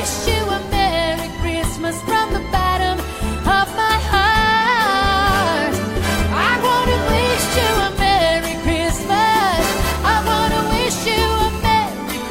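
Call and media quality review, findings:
GSM phone buzz, 9.00 to 11.67 s. Hard, raspy buzz at 216.7 Hz, rich in harmonics, unrelated to the programme. Steady throughout, consistent with a nearby 2G handset on a call. Level about 20 dB below the signal. Mechanism: the handset transmits in bursts 217 times a second. The audio input stage rectifies the RF pulses into an audible buzz.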